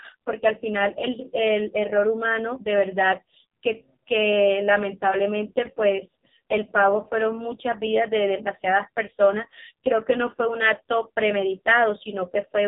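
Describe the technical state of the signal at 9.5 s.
At 9.5 s the speech is still under the AMR narrowband mobile codec that runs through the whole clip. A few pulses per subframe drive a vocal-tract model, so the speech sounds buzzy and synthetic, with heavy damage that points to a low mode near 5.15 kbps. A spectrogram shows a hard ceiling at 3.8 kHz and blurred harmonics below it.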